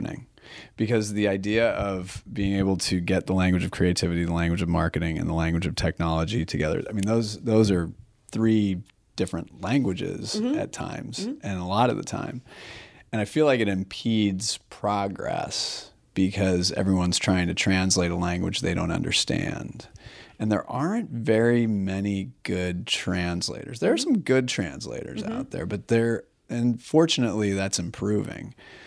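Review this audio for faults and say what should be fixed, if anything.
Nothing here needs fixing: the speech signal holds together throughout, with nothing audible that points to a problem in capture, processing or transmission.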